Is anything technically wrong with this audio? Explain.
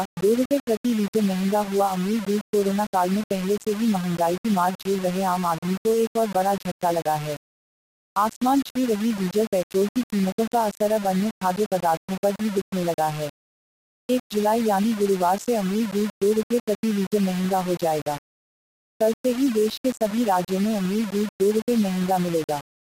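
Yes. Throughout the clip the sound carries a coarse, grainy distortion that shifts with the signal, only about 15 dB below it, and quiet passages crumble or sputter. The likely cause is low bit depth without dither, around 4 bits with rounding, so the error tracks the waveform.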